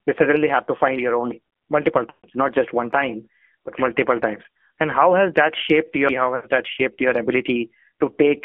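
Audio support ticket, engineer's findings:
AMR narrowband mobile codec, full length: band limited to roughly 250 Hz to 3.4 kHz, nothing above 4 kHz, buzzy synthetic texture on speech. Low-rate vocal-tract model with sparse pulse excitation; damage level fits AMR-NB near 7.4 kbps.

Lost AMR speech frames, 2.10–2.27 s and 6.36–6.46 s: sound smears, drawn out, then fades toward silence, with weak, rough recovery after. Decoder repeating last good pitch and filter settings at falling gain. Gaps of 140 ms and 80 ms fit runs of about seven and four 20 ms frames.

CD skip, 6.09 s: tick with a very brief mute, then playback resumes from a different point. Probable disc transport fault: laser jumped to another track turn after a knock or surface flaw. Jump size consistent with whole disc revolutions.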